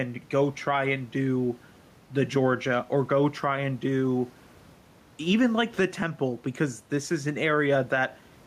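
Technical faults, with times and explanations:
Throughout, gain pumping: the gain swings by about 5 dB, pulling loud and soft parts closer in level, likely from excessive microphone gain meeting a fast limiter. The waveform shows flattened, even peaks.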